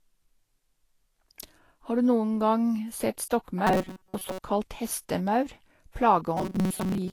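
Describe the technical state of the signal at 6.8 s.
At 6.8 s the speech sits inside a stretch of robotic sound from repeated short buffers that runs from 6.37 s to the end of the clip. A rigid, metallic buzz at 188 Hz is imposed on the speech, and most of the stretch is made of repeats. The likely cause is audio arriving too seldom, so playback loops the last few milliseconds while real audio is skipped. A repeat rate of 188 Hz points to a loop about 5.3 ms long. Unlike ordinary pitch errors or a vocoder effect, the buzz stays locked at one rate whatever the speaker's pitch does, and it tracks the original only roughly.

Beneath this, Vorbis compression is plainly audible throughout the clip. The treble is hissy and grainy, tones are roughened, and attacks are blurred, which is likely the result of a low-bitrate Vorbis encode, around 34 kbps by the sound of it. At that quality the encoder lowers its cut-off and quantises the high band so coarsely that fine detail turns into noise of similar energy. 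Unlike MP3's metallic swirling or pre-echo, the damage is a noisy, grainy fill in the treble over a smooth spectral floor.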